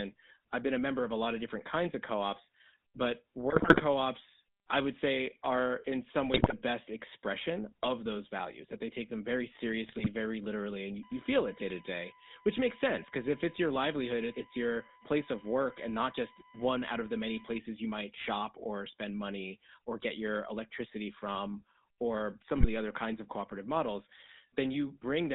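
The whole recording passes through a GSM full-rate codec, which fits its 13 kbps rate. The vocal tract is modelled and driven by a sparse, regularly spaced pulse excitation, so the speech takes on a buzzy, gravelly grain throughout. The band is confined to roughly 200 Hz to 3.7 kHz. A spectrogram shows a hard ceiling near 3.7 kHz, an empty floor below 200 Hz, and harmonics that look smeared and coarsely quantised rather than cleanly striated.

GSM bit errors break in four times: 3.5 to 3.81 s, 6.34 to 6.53 s, 9.84 to 10.07 s, and a brief one at 22.58 to 22.66 s. Corrupted filter, pitch and gain parameters reach the decoder, so individual 20 ms frames come out with bent spectra or wrong levels. The speech squawks, pops and gargles. The burst at 6.34 s has the highest error rate, about 6%. On the waveform these show as sudden amplitude spikes. On the spectrogram they are blocky, frame-width vertical smears.

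USB whine sits under the speech from 11.03 to 17.58 s. Current drawn in the bus's 1 ms frames leaks through power or ground as a fixed-pitch tone at 1 kHz and its multiples. The strongest component is at 19 kHz, roughly 20 dB below the speech. Because it lies above the codec's ceiling, it must have entered after the phone path. A spectrogram shows thin, perfectly horizontal lines at 1 kHz spacing that begin and end abruptly.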